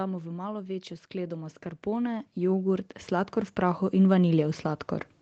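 From 0.54 s to 4.61 s, automatic gain rising lifts the level by about 14 dB. The control judged the input too quiet, so speech and background swell together.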